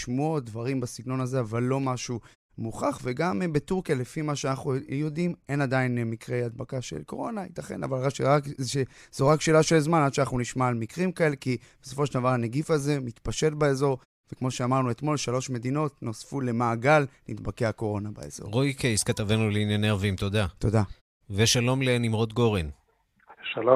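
No technical faults can be heard in this speech recording. In the pauses the output fades to silence as intended and comes back in time for the next sound, so the background drops away between phrases without cutting into any speech.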